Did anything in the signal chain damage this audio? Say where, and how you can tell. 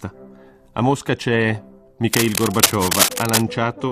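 Yes, in the analogue wiring: cable scratch noise from 2.1 to 3.42 s, dense irregular scratching about as loud as the sound, likely a worn connector moved. Its uneven texture distinguishes it from evenly spaced digital clicks.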